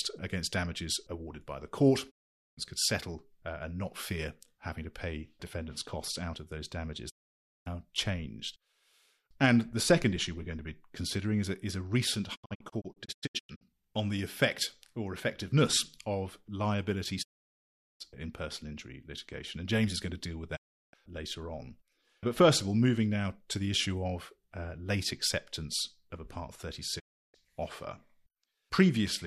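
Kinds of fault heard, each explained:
Digital broadcast dropout: the speech mutes in quick 20 ms fades six times, once as scattered short holes, because corrupted frames silenced the receiver until clean ones returned.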